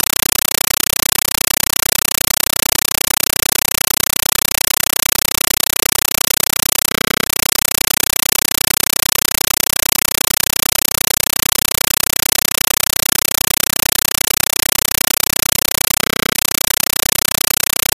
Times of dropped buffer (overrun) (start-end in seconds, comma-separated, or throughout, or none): none